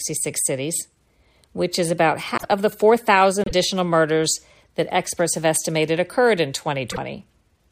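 A speech recording broken by three brief glitches where the speech skips ahead, at 2.37 to 2.45 s, 3.44 to 3.52 s and 6.91 to 6.98 s, each lasting 66 to 81 ms, or about three 26.1 ms MP3 frames. The likely cause is a broken MP3 bit reservoir: after frames went missing, the following frames reached back for borrowed data and decoded bytes belonging to other frames.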